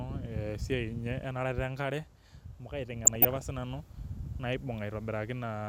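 A speech recording with DAB burbling from 3.05 to 3.41 s, just after "enkare amu". For roughly a third of a second the speech is overlaid with short blips of noise in individual sub-bands. This points to weak reception letting residual bit errors, on the order of half a percent, slip past error correction into the MP2 stream. The corrupted samples across that stretch fit about fifteen damaged audio frames.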